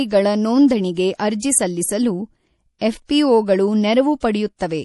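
Speech with audible MP3 compression damage throughout. The spectrogram shows a hard ceiling at 11.5 kHz and flickering, watery texture, which fits a low bitrate around 48 kbps as the likely cause. Pre-echo appears at 1.40–1.42 s, 2.79–2.81 s and 4.20–4.23 s. Short hiss smears 25 to 28 ms ahead of each attack, visible as a noise haze before the waveform's onset.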